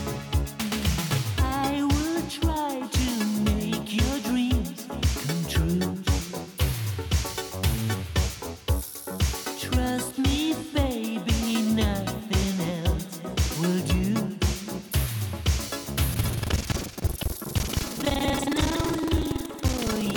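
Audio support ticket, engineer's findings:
Buffer tearing from 16.1 s to the end: steady robotic rattle at 21.5 Hz, only while signal's present. Writer and hardware read pointer have slipped. About a third of each period replays audio from about a fifth of a second earlier. Rate fits a 2048-sample buffer.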